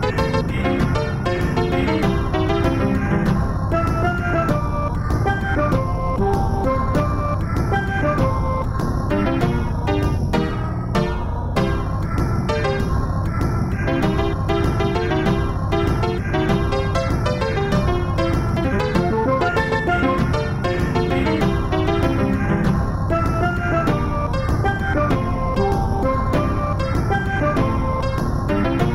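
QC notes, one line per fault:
No fault to note on any line.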